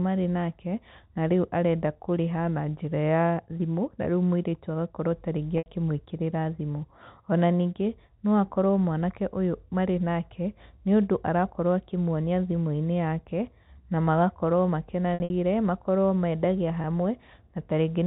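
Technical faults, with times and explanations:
5.58–5.66 s, packet loss with pitch repetition: about 80 ms of packets went missing, and the receiver looped the last pitch period across the gap, producing a brief held, buzzy tone.
15.14–15.30 s, packet loss with pitch repetition, between "na magakorwo" and "makorwo mendagia": 120 ms lost in patches over 160 ms, the longest run 60 ms. The gaps were bridged by repeating pitch cycles.
16.82–16.84 s, packet loss with pitch repetition, just after "makorwo mendagia": a single 20 ms gap, which fits one lost 20 ms packet. It was filled by repeating the pitch, heard as a tiny hold.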